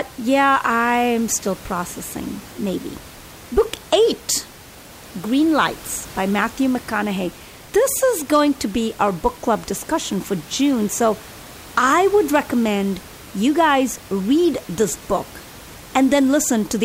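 No system faults are audible in the speech; the only background is the room's own noise, sitting about 21 dB below the voice and belonging to the recording itself.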